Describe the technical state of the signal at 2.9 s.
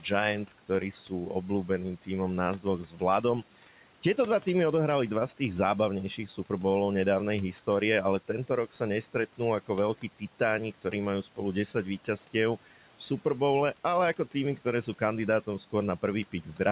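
At 2.9 s the speech is being cut by the noise suppressor, from 2.84 to 3.01 s. The suppressor misjudged a quiet stretch of speech as background and turned it down by up to about 11 dB, so for roughly 150 ms the sound turns faint and swallowed. Unlike a packet-loss dropout, nothing goes fully silent. The level dips and recovers, with the room noise lowered along with the speech.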